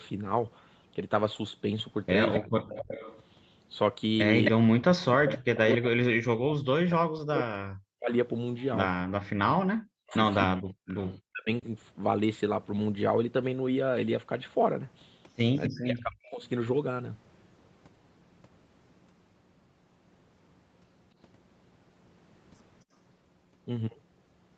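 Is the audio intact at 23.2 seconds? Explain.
Yes, the speech at 23.2 seconds is intact, with no fault at that moment.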